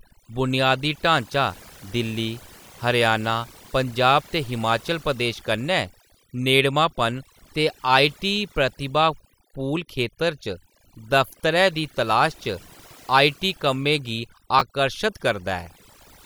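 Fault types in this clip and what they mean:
Overdone noise removal: noise reduction pushed too hard across the whole recording shuts off frequency bands it mistakes for noise. The background drops and breaks up into twinkling specks. Quiet parts of the speech vanish too.
Chunks out of order: just after "कम्में गी", at about 14.6 s, a 10 ms piece of audio plays one chunk late, after the piece that should follow it. Nothing is missing. The swapped order gives a brief jumbled moment.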